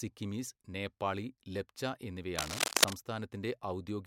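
This is a short speech clip, and right after "നേപ്പാളി ലെപ്ച" there's a burst of cable scratch noise from 2.36 to 2.93 s, dense and uneven rustling riding a bit louder than the speech itself. Likely a worn cable or connector being moved, its contact resistance jumping around.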